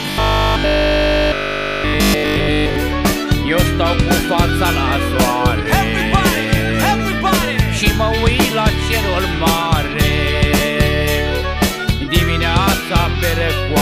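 From 0.02 to 2.76 s the sound takes on a rigid 50 Hz buzz: robotic sound from repeated short buffers. Essentially all of it is loops, likely from audio arriving too seldom, with a 20 ms buffer replayed while the real signal is skipped.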